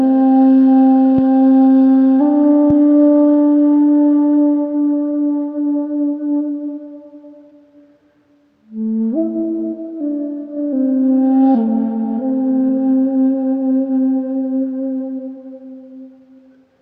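At 1.18 to 1.21 s there's a loud pop, and the same thing happens again at 2.70 to 2.73 s. Each is a single sharp click-thump lasting a couple of hundredths of a second and peaking a few dB above the surrounding audio, which carries straight on underneath. The likely culprit is a voltage spike getting into the chain, say from a plug, switch, static or driver glitch, and the downstream circuitry shaping it into that thump.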